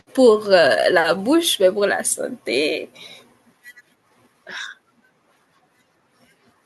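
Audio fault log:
No faults are heard in this speech clip. Nothing in it calls for a log entry.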